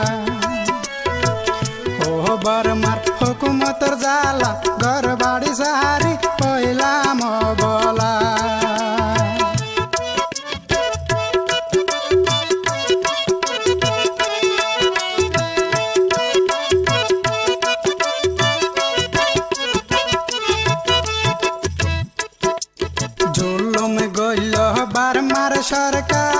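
Nothing goes wrong anywhere in this one; it's just sound carried over a WebRTC call path, with the G.722 codec keeping everything below about 8 kHz, as that call path would be expected to.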